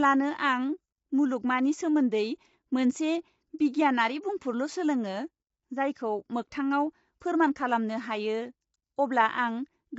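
Low-delay AAC compression runs throughout: the speech sounds rough and grainy, with noise filling the gaps between harmonics and nothing above 7.7 kHz. The likely cause is AAC-ELD, whose short frames blur pitch detail, at a rate that fits about 24 kbps.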